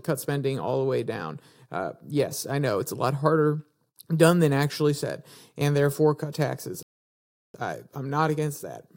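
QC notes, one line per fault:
6.83–7.54 s, playback stall: right after "and therefore cut taxes" the speech cuts out mid-flow and the output sits silent for about 0.71 s. The player most likely ran dry of buffered data or had its output thread blocked, leaving nothing to send.
7.54–8.97 s, time-compressed catch-up: once audio resumes, the speech runs about 1.1 times fast to the end while pitch stays normal. Short pieces are trimmed and cross-faded to work off the backlog, which is what makes the delivery sound hurried.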